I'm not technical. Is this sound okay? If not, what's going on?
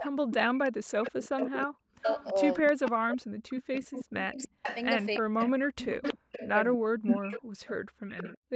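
No, there are two problems. The first is echo leak: a delayed copy of the voice, about a third of a second behind, comes back quieter than the original from 0 to 0.35 s, 1.03 to 6.47 s, and from 7.07 s to the end, where it gets louder. The likely cause is a speakerphone whose echo canceller didn't remove everything its microphone heard.

The second is speech suppressed in double talk. Between 0 and 7.3 s the talker's voice keeps dipping, sometimes almost vanishing, for about four seconds in total. That's likely the echo canceller getting confused while both sides talk at once and turning everything down.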